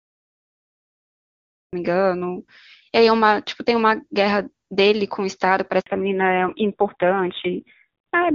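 For the first 1.73 s there is only digital silence, and at 1.73 s the speech enters mid-sound with no attack or fade. This cut-off start is the signature of a recording that began late, not a quiet lead-in, which would carry room noise and a natural onset.

At 5.80 s the voice dies away within a few tens of milliseconds and stays silent for 60 ms until 5.86 s. This is a handover gap: the call switched networks and no speech frames arrived meanwhile. Unlike a dropout, the sound fades rather than cutting off hard.

From 5.86 s to the end, everything above 4 kHz is gone, and the voice turns duller and rougher. This is a fallback to narrowband. Before the switch, the clear AMR-WB HD Voice sound fits a high wideband rate. Afterwards, the raspy narrowband quality points to a low AMR-NB rate of around 5.9 kbit/s. A steady low-pass filter would not also add this roughness or begin exactly at the handover.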